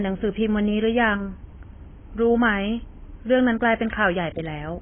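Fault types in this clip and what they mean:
AAC compression: the speech sounds dull and smeared, with nothing above 3.4 kHz and a watery, fizzy edge on sibilants and held sounds. The likely cause is heavy AAC-LC coding, which fits a very low bitrate of around 16 kbps.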